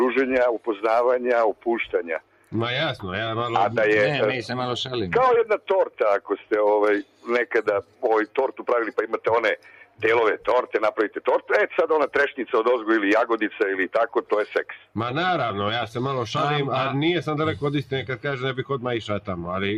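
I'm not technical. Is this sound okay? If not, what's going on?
No. A noise suppressor built for speech was left on, so this is a case of a noise suppressor applied to music or sounds. It treats steady tones and fading tails as noise. Sudden attacks get through, but held sounds keep sinking, so the audio pumps and thins.

In six places you can hear the sound cut by the noise suppressor, where it dips deeper than elsewhere: 2.19 to 2.53, 6.20 to 6.51, 7.03 to 7.27, 7.83 to 8.03, 9.57 to 10.0, and 14.77 to 14.95 seconds.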